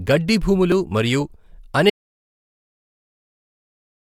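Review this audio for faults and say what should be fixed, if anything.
The input feed was most likely lost partway through, perhaps a disconnected device, a failed link or an accidental mute, while the recorder kept writing silence. The result is an audio dropout to silence: the speech cuts off abruptly at 1.9 s and the remaining 2.1 s through to the end is dead silence, with no room tone underneath, so whatever followed is missing. Securing connections, disabling stray mutes and monitoring input levels during capture would prevent it.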